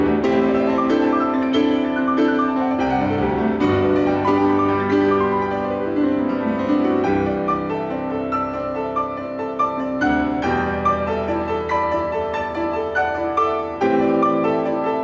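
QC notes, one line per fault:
Throughout, gain pumping: gain swings about 5 dB, likely a fast limiter reining in too-high gain.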